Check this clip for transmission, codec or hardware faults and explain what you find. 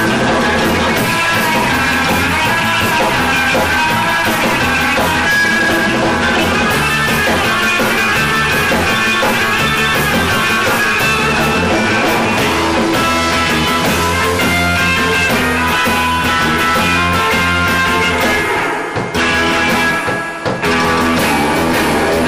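One fault is present, hard clipping, and it runs through the whole clip. The signal is driven about 12 dB past what a stage can pass, so roughly a fifth of the samples hit the ceiling and are sliced flat. The waveform shows squared-off plateaus, the spectrogram shows harmonic smearing far up the spectrum, and every loud passage comes out as harsh fuzz.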